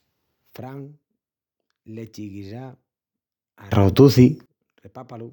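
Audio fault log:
3.72–4.46 s: sudden gain jump. The speech and the background noise leap up together by about 23 dB, then fall back at 4.46 s. The level changes between one sample and the next. A gain setting was likely applied without any ramp.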